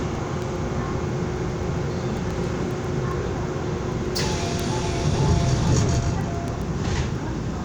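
From 0.15 s to 7.56 s, word clock ticks recur roughly every 0.15 s, about fifty in all: sharp clicks of uneven strength. The receiving clock is unlocked from the sender's and drifts by around 150 ppm, so one sample slips at each crossing.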